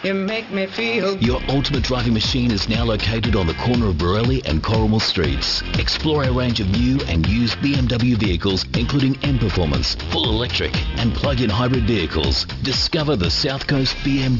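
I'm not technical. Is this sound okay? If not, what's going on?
No, there's aliasing all the way through: high sounds above about 6 kHz fold back as gritty, metallic false tones, likely from a careless drop to a lower sample rate.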